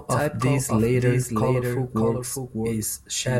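Speech runs with a second, quieter copy of itself trailing about 0.7 s behind for the whole clip, so every phrase is echoed by a full-band duplicate at roughly 5 dB down, with no reverberant tail or room colouring. This is a doubled audio track, likely from the same signal being picked up a second time through a slower path, or from an edit that left two copies out of alignment.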